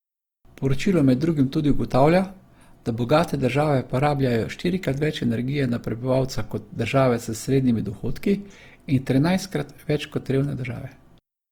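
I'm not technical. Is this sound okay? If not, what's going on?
No. From start to finish the speech has a rough, grainy texture, with a noisy hiss woven into it, as if the sound were sandpapered. This is likely Opus compression, a way of shrinking audio files. Here it was squeezed hard enough that the encoder ran short of detail and filled the gaps with borrowed or noise-like material. The full range of highs is still there, but it sounds coarse instead of clean.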